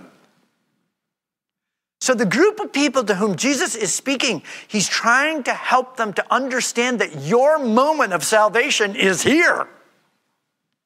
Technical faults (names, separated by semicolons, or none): none